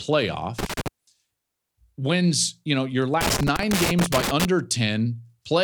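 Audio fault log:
0.59–0.88 s, loose connector crackle: a worn contact briefly makes and breaks, chopping the speech into an irregular scratchy burst.
3.21–4.45 s, loose connector crackle: after "wins you know your", the intermittent contact chops the signal again, giving a longer ragged stretch of crackle.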